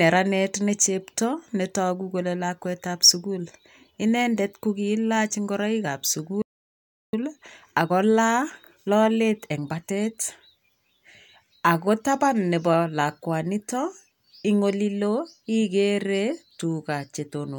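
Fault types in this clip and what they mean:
Playback stall: Right after "ingoroik ab" at 6.42 s the speech cuts out mid-flow and stays silent for about 0.71 s before resuming at 7.13 s, likely because the player ran short of buffered data or its output thread was briefly blocked.
Time-compressed catch-up: From 7.13 s to 10.13 s the speech runs hurried at about 1.1 times normal speed, with pitch unchanged, as the player trims its post-stall backlog by cutting and cross-fading tiny segments.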